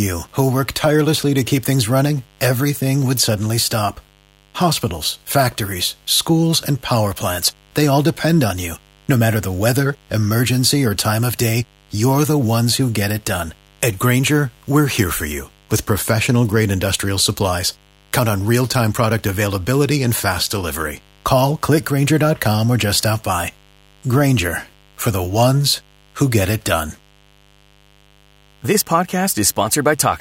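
A speech recording carries mains buzz from start to finish, a steady raspy layer sitting well below the voice, roughly 35 dB down. It comes from 50 Hz mains interference, where sharp switching spikes from a dimmer, rectifier or unshielded run enter the signal path twice per cycle. On a spectrogram it shows as evenly spaced horizontal lines at multiples of 50 Hz climbing into the kilohertz range; the waveform carries a faint repeating spike pattern every 10 ms.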